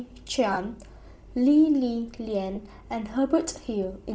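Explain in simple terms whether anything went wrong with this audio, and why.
Bluetooth LC3 compression runs through the whole clip. The speech has a breathy, grainy edge and a dulled top end, most likely because a low-data Bluetooth LE Audio link threw away much of the high detail and filled that range with soft noise instead.

Lost LE Audio frames occur twice, from 0.53 to 0.57 s and from 2.55 to 2.57 s. Each time a few short chunks of audio never arrived, and the decoder patched the gap by repeating its last sound with scrambled detail, leaving a brief noisy smear.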